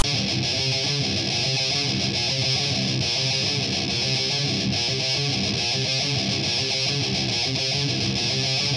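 From 0.00 to 0.04 s, file tags are played as audio: text metadata decoded as samples gives a loud, lopsided rasp with hard edges, then zero padding drops to silence. That sequence separates it from a random click or dropout, which would lack the structured text.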